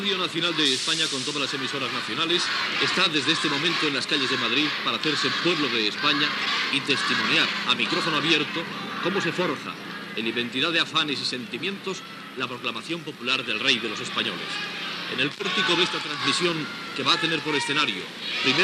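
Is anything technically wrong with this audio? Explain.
Yes. Throughout, it's dull and gurgly with granular grit, likely MP2 compression at a rate that fits about 80 kbps, starving upper sub-bands so they drop out and flicker.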